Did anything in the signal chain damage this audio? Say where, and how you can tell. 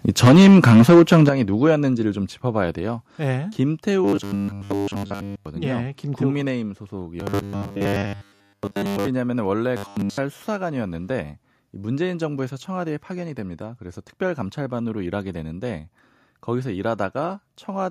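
Yes. From 0.09 to 1.29 s the loudest syllables carry a harsh, crackling edge. This is microphone overload, with the peaks driven about 13 dB past full scale and likely flattened at the analogue-to-digital converter. Roughly a sixth of the samples in that stretch sit pinned at the limit. On the waveform the peaks look squared off into flat tops. The spectrogram shows broadband splatter running up through the kHz range on each clipped syllable.

The microphone volume is stepped down abruptly four times: by about 3 dB at 0.28 s, about 10 dB at 1.29 s, about 3 dB at 2.31 s and about 2 dB at 4.35 s. Each step lowers voice and background together, which points to the call processing, likely its automatic gain control, cutting the device input level in response to the overload. The largest step lands exactly where the clipping stops. On a waveform each one appears as a sudden drop in the envelope, and on a spectrogram as a vertical line where every band darkens at once.

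From 4.05 to 5.46 s, 7.20 to 9.07 s and 9.77 to 10.18 s the sound turns into a rigid, metallic buzz that only loosely follows the speech. This is robotic sound from repeated short buffers. Audio arrived too late at the driver or buffer stage, likely, so about 10 ms segments were looped in place of most of the real signal. That produces a fixed 100 Hz pitch, drawn on the spectrogram as evenly spaced horizontal harmonic lines, with a waveform that repeats almost identically every 10 ms.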